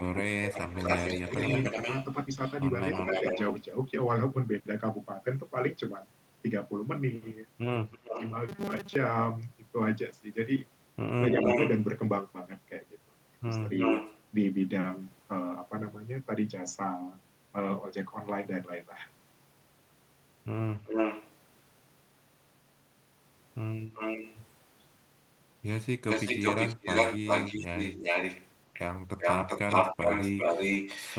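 From the start to 3.4 s there is echo leak: a delayed copy of the sound arriving about 292 ms late and only about 5 dB below the original. It is likely an echo canceller on a loudspeaker end letting its microphone pickup through. Unlike reverberation, it is a distinct repeat rather than a smear.

Overlapping it, from 0 to 1.39 s, comes speech suppressed in double talk. Roughly 400 ms of the talker dips by up to about 20 dB, likely because the canceller mistook simultaneous talk for echo. These are level drops tied to overlap, not clean packet-loss gaps.

The pattern returns at 7.91 to 8.3 s, with echo at 314 ms and a suppression dip of about 25 dB between 7.98 and 8.17 s.

From 8.49 to 8.96 s there is robotic sound from repeated short buffers. Most of this stretch is replaced by repeats at a fixed 200 Hz rate, which fits a 5 ms buffer, likely because audio arrived too seldom. The result is a rigid metallic buzz instead of a delayed copy.

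Echo leak recurs at 11.36 to 11.84 s, 13.73 to 14.19 s and 20.85 to 21.29 s, then continuously from 23.95 s to the end. Here the echo is about as loud as the original, and its delay grows from 326 to 382 ms.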